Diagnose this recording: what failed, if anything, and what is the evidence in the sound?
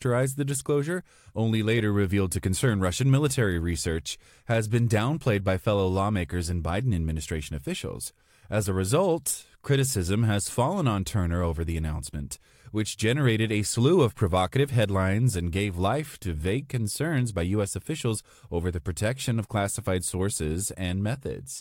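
Nothing in the speech here points to a failure at any stage, so there's no fault to diagnose.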